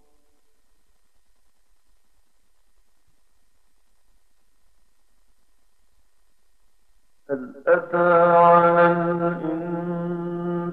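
No technical faults can be heard anywhere in this clip.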